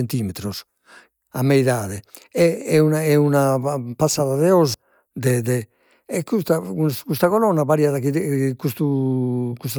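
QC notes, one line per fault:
No faults heard.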